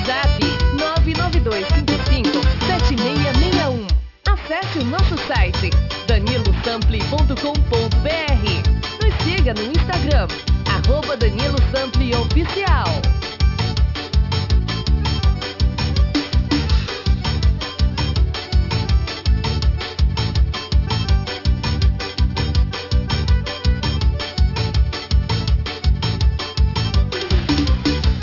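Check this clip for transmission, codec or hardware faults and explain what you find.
Aliasing runs throughout. The rate appears to have been dropped, which fits a 12 kHz rate, without filtering. Content above 6 kHz folds back as gritty, metallic tones roughly 15 dB down, and the spectrogram shows mirrored energy packed hard against 6 kHz.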